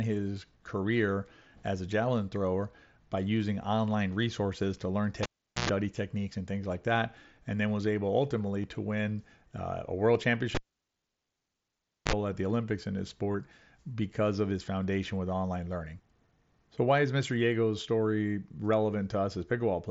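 A speech clip with two kinds of fault. A cable is pulled and plugged in twice, from 5.23 to 5.69 s and from 10.55 to 12.13 s, ending just before "at the". Each time a pop opens a near-silent gap of about 0.41 s and then about 1.53 s. While only the plug tip touches, a short burst of mains buzz follows, 60 Hz for about 0.11 s the first time and 50 Hz for about 0.05 s the second, and a second pop brings the sound back. The pops and hum set this apart from dropouts inside the digital link.

The other fault is concealed Bluetooth headset packet loss, at 8.63 s between "then was able ultimately" and "to win uh a", at 10.14 s, and at 13.32 s between "in his" and "because of his foundation". The headset link drops audio, and the receiver fills the hole by repeating the closest-matching recent waveform. The first two gaps are 7.5 ms, which fits a single lost mSBC frame, and the third is 15 ms, which points to two lost frames. 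Single losses like the first two are nearly hidden, with no pop, silence or hum. The mSBC codec itself carries the speech up to about 8 kHz.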